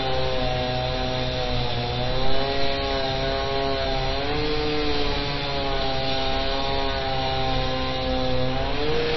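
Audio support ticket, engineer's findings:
Dull, band-limited sound, entire clip. Nothing above 5.8 kHz. Watery, swirling texture on sustained content, smeared attacks. Likely MP3 compression: encoder short of bits, treble cut at a fixed point, weak frequency lines dropping in and out frame to frame. Damage plainly audible. Fits a low bitrate around 24 kbps.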